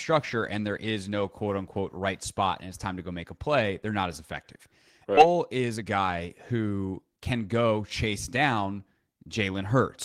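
At 5.17 to 5.19 s the speech lurches forward: what comes next arrives abruptly, as if a piece of the sentence had simply vanished, with no pause or filler bridging the join. This is a skip ahead. About a second of audio was discarded while later material was already queued, so playback jumped straight to the newer audio and the two edges were spliced almost directly, shortening the delay by roughly the same amount.

Right afterwards, from 5.25 to 7.72 s, the talking sounds rushed, yet the pitch stays where it was. That is a jitter buffer speed-up: with more audio stored than the receiver wanted, it trimmed many tiny pitch-period-length slices in succession, running the speech at about 117% of normal pace and removing something like 400 ms in total.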